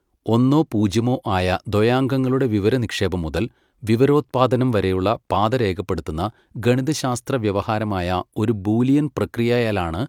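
A speech recording with no technical fault to be heard. Nothing in the audio calls for a time or a cause.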